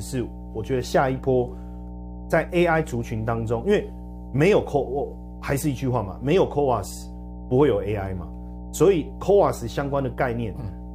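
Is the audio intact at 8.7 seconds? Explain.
No. At 8.7 s, as throughout the clip, mains hum runs under the speech: a ground loop or nearby transformer couples a steady 60 Hz tone into the signal, only modestly below the speech. A spectrogram shows an unbroken line at 60 Hz with some low harmonics, and the waveform rides on a slow, regular ripple.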